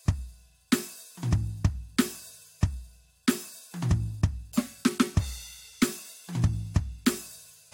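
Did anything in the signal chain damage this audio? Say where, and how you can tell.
No, nothing in this music points to damage at any stage of the chain.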